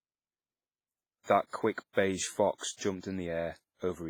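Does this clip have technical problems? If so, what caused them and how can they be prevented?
Yes. The speech sounds ringing and washy throughout, with hiss breathing along with it, likely heavy WMA compression at a rate that fits about 24 kbps. Encode at a higher bitrate or use a better codec.

Pre-echo shows up as soft hiss smearing ahead of attacks at 1.23, 1.73, 1.93, 2.56 and 3.00 s. Each is 31 to 53 ms, where block-wide quantisation noise leaks before the onset. Shorter transform blocks or more bitrate would keep those attacks clean.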